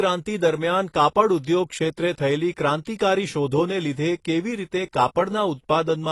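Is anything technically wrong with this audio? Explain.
Yes. Throughout the speech there's AAC compression damage: everything above 11.5 kHz is gone, and sibilants sound fizzy and smeared. It's likely a low-bitrate AAC-LC encode, around 32 kbps judging by the sound, where the codec drops the top band and coarsely quantises what's left.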